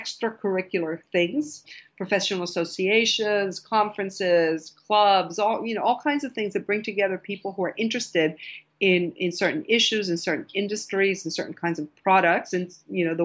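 No technical faults can be heard anywhere in this clip.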